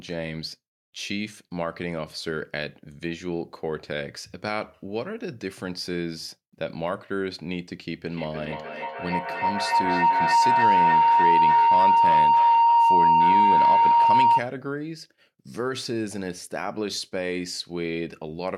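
Speech clip with a feedback howl running from 8.11 s to 14.52 s. It sounds like two devices in the same room on one call: sound from the loudspeaker goes back into the microphone and comes out louder each trip, so the repeats build instead of dying away. It settles into a tone of around 1 kHz, pulsing roughly every 300 ms, and at its loudest sits about 11 dB above the speech.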